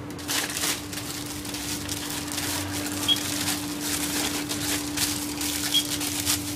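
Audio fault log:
No fault found: the recording of sounds has nothing in its technical state that calls for attention.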